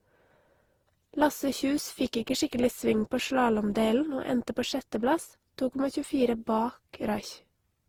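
From start to finish the speech carries a swirly, hollow quality with smeared consonant attacks, more damage than a single lossy pass at a moderate rate would leave. This is generation loss, likely from the audio being decoded and re-encoded through Opus around ten times. The character points to roughly 48 kbit/s per pass. Each new pass quantises on a shifted frame grid, so the noise accumulates. Nothing remains above 20.4 kHz.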